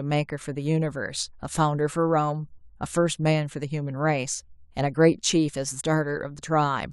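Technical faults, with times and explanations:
5.79–5.82 s, compressed frames skipped: the speech suddenly jumps ahead by around a tenth of a second, so a small piece of the speech just isn't there. That fits roughly four frames of 23.2 ms each that went missing or that the decoder threw out as damaged.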